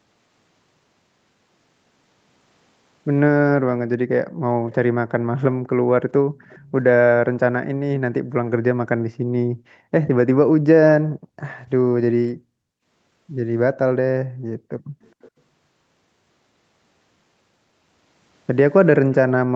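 From 3.58 to 6.36 s the room background keeps getting pulled down, about 40 dB at its deepest and around a second and a half of it in total. That's background gated by the echo canceller: while the far end's audio was playing out of the loudspeaker, the canceller clamped the mic hard, so the ambience drops away and pops back when it releases. Inside that stretch, at 4.69–4.74 s, there's a brief faint ghost of earlier speech, and another at 6.36–6.71 s, just as the gate lets go. Both trail the original by 420 ms and sit about 30 dB under the main speech. That's likely an echo leak, with some of the loudspeaker pickup slipping past the canceller and getting sent back. The same gating returns at 8.21–9.93 s and 10.99–12.52 s, again dipping about 40 dB. At 14.79–14.91 s there's a shorter dip of about 35 dB. A third echo fragment follows at 15.02–15.3 s with the same 420 ms delay and low level. 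One last tiny dip of about 35 dB lands at 19.5–19.54 s. Throughout, the top end stops at 8 kHz from the Opus call path.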